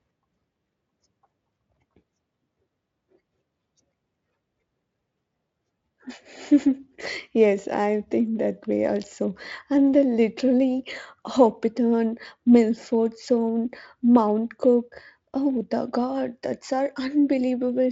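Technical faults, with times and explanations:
No technical faults can be heard in this speech. It has passed through the Speex codec at what sounds like a high-quality setting, around 34 kbps, leaving at most a faint coding trace, with the band stopping near 7.7 kHz.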